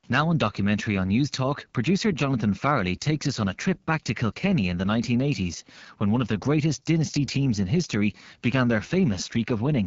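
From start to finish the speech passes through the AMR wideband (HD Voice) codec at a low setting. The codec models the voice with a pulse-excited vocal tract filter, and the harshness points to one of its lowest rates, around 8.85 kbit/s. With so few bits the pulses and filter shapes are coarsely approximated, giving a plainly rough, raspy grain throughout, and nothing is heard above about 7.4 kHz.

From 1.97 to 2.24 s a microphone overload adds a short burst of distortion. The input gain was likely set too high, so peaks ran about 3 dB past the converter's ceiling and had their tops flattened. Only a small fraction of samples is affected, but the loudest moments in that stretch take on a harsh, crackling edge.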